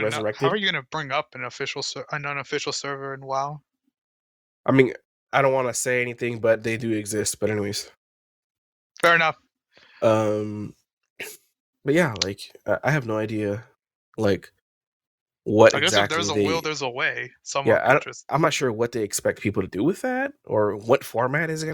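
A speech recording with no audible technical faults.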